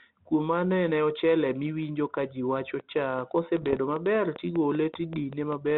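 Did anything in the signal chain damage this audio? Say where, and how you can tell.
Yes. From 2.80 s to 5.72 s, just after "ochele miwinjo kaji wacho", a regular train of clicks ticks over the speech and the gaps at about 5 per second, roughly fifteen pops in all. They are alike in shape and peak about 5 dB above the speech. This points to the analogue wiring or interface stage, likely interference from nearby equipment or a faulty connection or power supply injecting the same pulse on a steady cycle.

Between 3.62 s and 3.77 s the sound breaks into rough, popping bursts with brief jumps in level. These are bit errors on an ADPCM link. The band-limited G.726 telephone coding at 32 kbit/s runs through this section. A bit error rate of around half a percent hit 8 frames. Each flipped bit also knocks the decoder's step size and predictor off track, so every error rings on for milliseconds.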